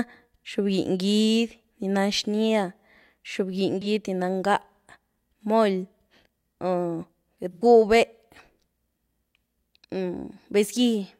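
At 3.81 s there's a brief smeared, noisy patch lasting about 43 ms, which fits a single lost AAC frame. Then at 7.53 s a longer one of about 85 ms, consistent with two frames gone. Both are AAC frame loss with concealment: the decoder had nothing for those stretches, so it patched them from the last good spectrum, giving that blurred, phasey texture instead of clean audio.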